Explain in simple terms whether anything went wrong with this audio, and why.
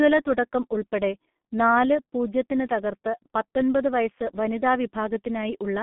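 The speech went through a G.723.1 codec, an old internet-phone squeezer, for the whole clip. It keeps roughly 150 Hz to 3.5 kHz, so voices sound muffled and hoarse, with smeared consonants.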